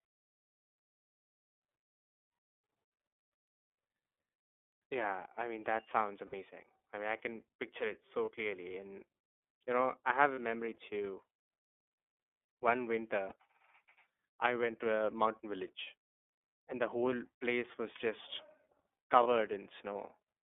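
The iLBC codec colours the whole recording, giving the speech a slightly rough, synthetic edge. The spectrogram shows energy confined to roughly 250 Hz–3.5 kHz, with a hard ceiling. The plainly audible coding grain fits iLBC's 13.33 kbps mode with 30 ms frames.

Lost iLBC frames then interrupt the speech. At 6.27–6.34 s, between "I mean that sounds" and "I mean I can", a 60 ms hole, which fits two missing 30 ms frames, is filled by the decoder repeating the last pitch cycle mixed with noise. It sounds like a brief held, buzzy vowel. Single-frame losses of about 30 ms follow at 8.25–8.29 s, at 10.35–10.39 s (between "know I have a" and "memory too"), at 13.28–13.33 s, at 15.84–15.88 s (just after "a mountain"), and at 19.23–19.27 s. On a spectrogram each one appears as a short stretch of flat, repeated harmonics smeared with noise. In the waveform it looks like a run of near-identical cycles. 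Because each frame decodes independently, the speech sounds normal again immediately afterwards.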